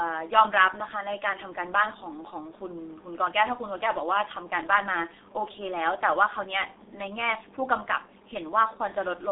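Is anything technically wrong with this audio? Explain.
Yes, the speech has passed through a G.723.1 codec throughout, with heavy damage. It sounds muffled and hoarse with blurred consonants, consistent with a roughly 6 kbit/s stream whose 30 ms frames update the voice model slowly. On a spectrogram, energy sits between 250 Hz and 3.7 kHz, with nothing above 3.8 kHz.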